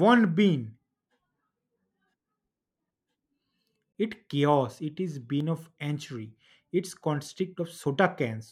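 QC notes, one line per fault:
1.26 s, dropped buffer (overrun): a small jump forward in the speech, roughly 20 ms skipped, likely a buffer overwritten before it was read.
3.92–3.95 s, gap at a join of encoded pieces: a 24 ms gap in continuous speech with smeared edges, from encoder delay and padding left in at the join, then the speech picks up where it stopped.
5.40 s, dropped buffer (overrun): another skip of roughly 20 ms just before "of entry", likely the same overrun, with the sides butted together and no silence.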